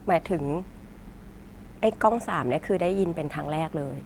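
From 0.41 s to the end, mains buzz runs under the speech at about 30 dB below it: a steady, raspy 60 Hz buzz whose harmonics come from switching spikes picked up from the supply.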